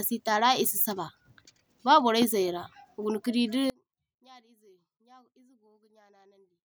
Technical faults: audio dropout to a faint residue

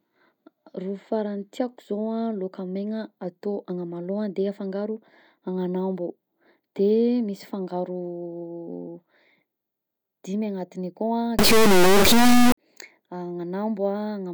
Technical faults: integer read as float

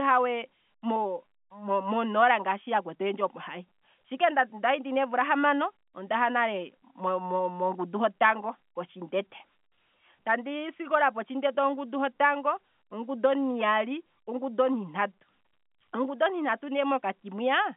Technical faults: none

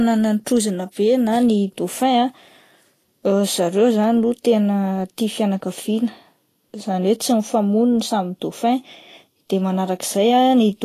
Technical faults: Vorbis compression

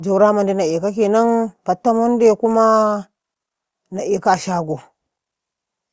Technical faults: none

